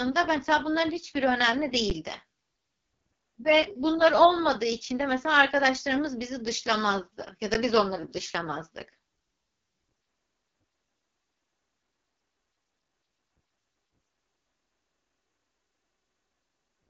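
Throughout, the speech carries AMR wideband (HD Voice) codec damage. It fits the lowest 6.6 kbit/s mode, so it sounds rough and raspy. Nothing reaches above 7.3 kHz.

At 1.90 s, 7.54 s and 9.17 s, an underrun with held sample occurs. The output froze on its last value for about 11 ms, 11 ms and 3 ms, which fits a 512-sample buffer for the first two. Playback resumed where it stopped, so each is a brief flat stall with only a soft edge.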